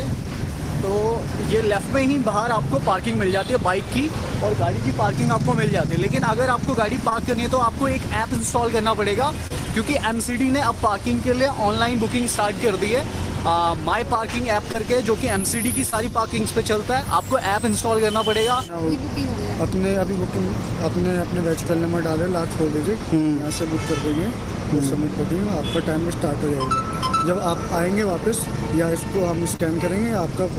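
Short concealed packet loss occurs five times, at 7.09–7.13, 9.47–9.52, 14.72–14.76, 15.90–15.94 and 29.56–29.68 s. Each time 20 ms of audio arrived too late, and the decoder extrapolated the preceding sound before crossfading back, leaving a brief smear or wobble.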